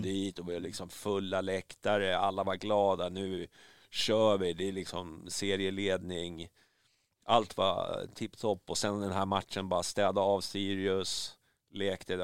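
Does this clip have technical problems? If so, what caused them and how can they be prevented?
No, nothing in this speech recording points to a technical fault, so there is nothing to trace back or prevent.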